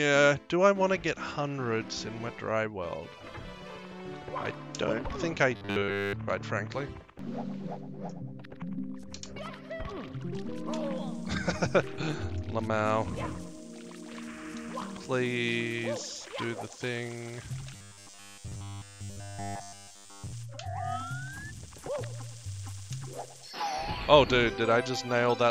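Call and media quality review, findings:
Robotic sound from repeated short buffers, 5.56–6.13 s and 17.74–20.33 s: all of the sound becomes a metallic 100 Hz buzz, likely from late delivery forcing 10 ms loops. The spectrogram shows rigid 100 Hz harmonic stripes, and the waveform shows identical repeating cycles.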